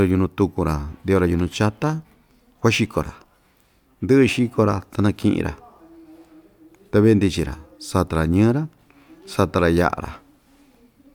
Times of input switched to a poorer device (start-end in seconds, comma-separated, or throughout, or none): none